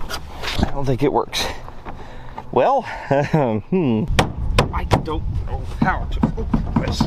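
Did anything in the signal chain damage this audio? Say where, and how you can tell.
No, nothing audible points to damage at any stage of the chain, from capture through to playback.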